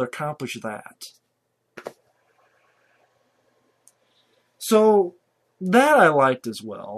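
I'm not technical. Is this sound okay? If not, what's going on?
Yes, this sound is okay. I didn't hear any technical problems in it.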